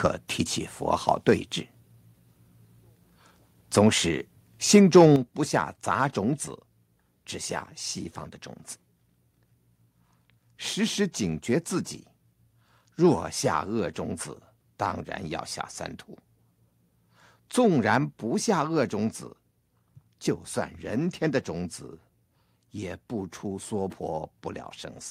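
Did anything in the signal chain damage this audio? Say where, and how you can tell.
Yes. From 4.74 to 5.06 s the loudest speech peaks turn harsh and crackly, with flattened tops. This is microphone overload at the converter stage, likely from input gain set too high, driving peaks about 3 dB past full scale so a small fraction of samples clip.

At 5.16 s, right after that distorted stretch, voice and background together drop suddenly by about 8 dB and stay lower. This is microphone volume stepped down in call processing, likely the software reacting to the clipping by cutting the device's input level in one step.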